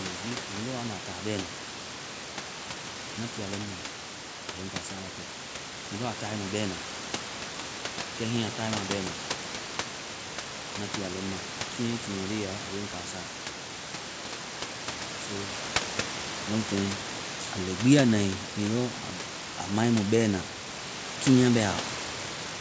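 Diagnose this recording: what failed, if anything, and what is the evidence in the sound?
Nothing failed; no fault is audible anywhere.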